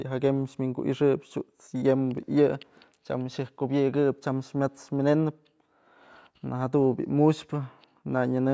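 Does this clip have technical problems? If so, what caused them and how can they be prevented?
No, nothing's wrong with this speech clip; it just carries the usual call microphone processing, so the deepest bass is trimmed away and there's nothing up above 8 kHz, which is normal for a call.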